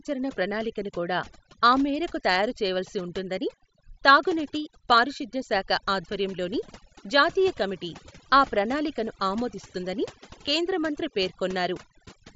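Overdone noise removal runs through the whole clip: the suppressor was set so aggressively that it pushes any frequency band near its noise estimate far down or out, taking soft parts of the speech with it. The background collapses to near silence flecked with twinkling specks.

At 6.03 s, just after "ఉంటుందని తాగునీటి పారిశుద్ధ్య శాఖ", concealed Bluetooth headset packet loss occurs. About 7.5 ms of audio went missing, which fits a single dropped frame, and the receiver filled it with a copy of the preceding waveform, so it is nearly inaudible. At 10.46 s, between "కమిటీ ఆ ప్రణాళికను ఆమోదిస్తుందని" and "కేంద్ర మంత్రి", a longer 15 ms gap, likely two frames, is patched the same way, leaving a buzzy smear and a slight warble as the real audio resumes. The mSBC wideband link itself adds only light graininess.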